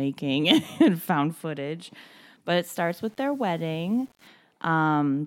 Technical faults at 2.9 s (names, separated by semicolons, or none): low bit depth without dither